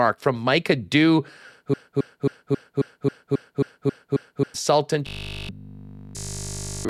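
From 1.74 s to 4.54 s the speech falls into a broken-record loop. A single fragment about 270 ms long plays ten times back to back, each repeat identical, so the sound stutters in a rigid rhythm for nearly three seconds. Whatever should have been heard in that interval never arrives. The likely cause is a stall in the player or stream, which kept re-sending the last chunk it held until fresh data resumed.

From 5.07 s to 6.89 s the sound becomes robotic from repeated short buffers. Across essentially the whole stretch, a 20 ms slice is replayed over and over while the real audio between refills is skipped. That repetition imposes a fixed 50 Hz pitch, heard as a hard metallic buzz that only loosely tracks the syllables. The likely cause is audio being delivered too seldom, with the software padding each gap by looping its last buffer.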